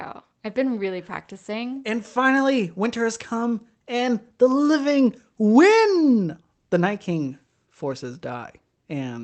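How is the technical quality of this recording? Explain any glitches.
No glitches; the speech is heard over a normal call link.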